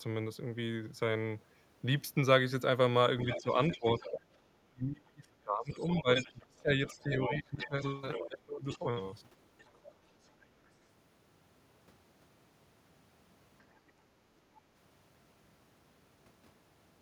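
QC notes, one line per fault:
3.3 to 4.11 s, 5.71 to 8.78 s and 9.58 to 10.27 s, other side's voice leaking through: a second voice sits behind the main talker, roughly 10 dB below it in the first two stretches and far fainter, around 30 dB down, in the last. The likely cause is the far end playing on the talker's loudspeaker and reaching the microphone, with the echo canceller failing to strip all of it out.
3.38 to 8.85 s, speech suppressed in double talk: the main voice sinks and thins, falling by as much as about 25 dB at its deepest and affecting about three seconds in total. This is likely the echo canceller, faced with both sides talking at once, being unable to tell its own talker from the echo and turning both down together.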